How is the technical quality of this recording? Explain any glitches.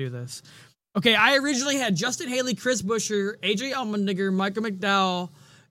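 No technical faults are audible anywhere in the recording.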